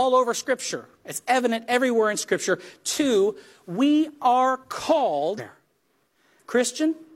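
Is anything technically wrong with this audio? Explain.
Yes. Around 5.34 to 5.40 s there's damaged data in the compressed stream; the decoder loses sync on the bad frames and you get a brief glitch.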